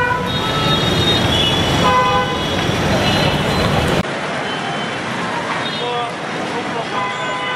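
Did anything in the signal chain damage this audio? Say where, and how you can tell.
Yes. At 4.01 s a 20 ms gap is followed by sound that stays duller to the end, with nothing above 11.4 kHz, a few dB quieter, over a new noise floor roughly 35 dB down. That's likely an input switched to a poorer device at the driver stage. Unlike a codec bandwidth drop, the level and noise change with it.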